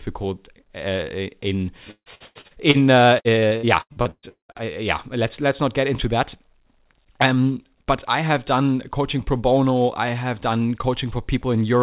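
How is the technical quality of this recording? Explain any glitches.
The recording is marred by two bursts of repeated packet loss (robotic sound), heard through a narrowband call path with nothing above 4 kHz, which fits a G.711 A-law call.

From 1.91 to 2.77 s and again from 3.19 to 4.62 s, just before "yeah let's let's not", packets kept arriving late or not at all. The receiver patched each hole by extending the last sound, so nearly half of each stretch is filled-in audio. This produces choppy speech with pieces missing. Gaps last up to 148 ms in the first burst and up to 200 ms in the second.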